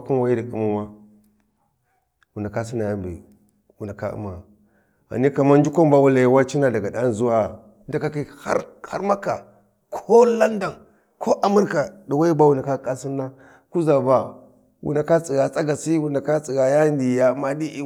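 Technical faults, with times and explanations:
No technical faults are audible.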